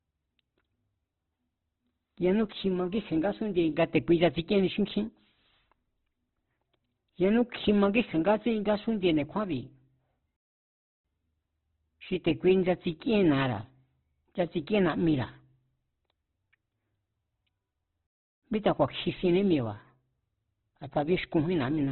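Throughout, the speech sounds muffled, rough and grainy, with nothing above about 4 kHz. This is likely heavy Opus compression, which fits a very low bitrate of around 12 kbps.

At 10.36 s the sound drops to silence for 0.68 s, and again at 18.07 s for 0.36 s before "míta ku̱a̱". Each is likely a playback stall, with the player briefly starved of data.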